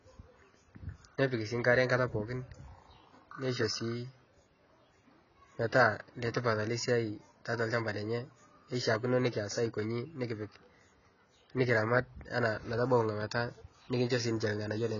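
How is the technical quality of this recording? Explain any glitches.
The recording is heavily degraded from start to finish by a single fault, AAC compression. The speech was likely squeezed through an AAC-LC encoder at a very low bitrate, and the damage points to something around 16 kbps. Starved of bits, the encoder cut everything above 7 kHz and quantised the remaining frequency lines coarsely, discarding detail its hearing model judged expendable. The result sounds dull and muffled, with a smeared, warbling quality on held vowels and a fizzy, watery edge on sibilants.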